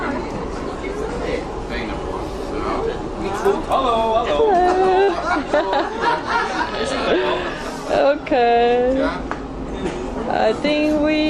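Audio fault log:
5.03–5.11 s burst of packet loss: lost packets concealed by stretching the last sound 45 ms while fading it, then 40 ms skipped. Spectrogram shows a smeared, dimming band, then an abrupt jump.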